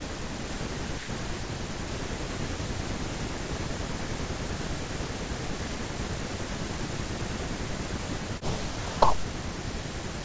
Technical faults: speech suppressed in double talk

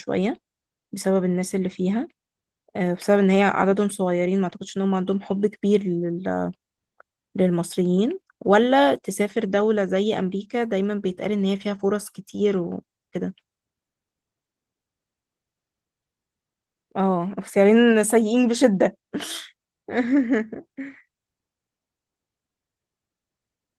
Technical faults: none

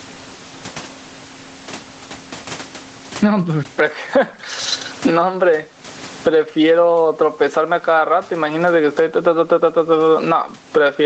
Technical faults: gain pumping

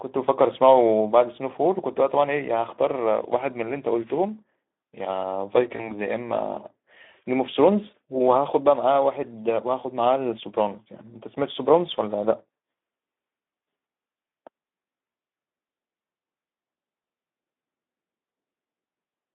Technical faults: Speex codec; VoIP packet loss concealed by the speech codec

